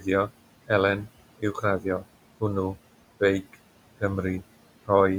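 A short speech recording carries noise suppressor artifacts from start to finish. The suppressor pulls down the room noise, which sits about 19 dB below the speech, by about 18 dB in the gaps. Because the gain is recalculated frame by frame and band by band, the residue sinks between phrases and rises again under them. On a spectrogram the noise floor looks blotchy and speckled, with isolated bright cells flickering in otherwise dark pauses, and it thickens each time speech resumes. Speech cut by the noise suppressor occurs twice, from 1.38 to 1.63 s and from 1.81 to 2.05 s. In each stretch roughly a tenth of a second of quiet speech energy was mistaken for noise and turned down with it, by up to about 18 dB in the first and about 10 dB in the second, so those sounds come across swallowed and faint. In the waveform the envelope dips sharply inside otherwise continuous speech. On the spectrogram the quieter high-frequency detail, where soft consonants sit, thins out or vanishes in those windows.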